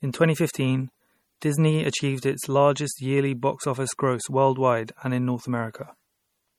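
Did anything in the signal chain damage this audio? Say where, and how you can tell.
Yes, at the codec stage, across the whole speech clip. The sound has the smeared, swirly texture of heavy MP3 coding, and on a spectrogram nothing appears above 20 kHz. This is likely low-bitrate audio saved at a high bitrate: a coarse first pass that fits roughly 48 kbit/s MP3, later re-encoded near 320 kbit/s. The second encode keeps those first-pass artefacts but cannot restore what was lost.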